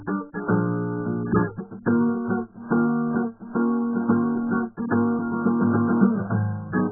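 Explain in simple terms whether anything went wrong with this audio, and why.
Yes, something's off for the whole clip: the music sounds muffled and smeared, with nothing above about 1.7 kHz and a warbly, watery texture on held sounds. That's AAC compression, likely squeezed very hard, throwing away the top end and blurring the detail.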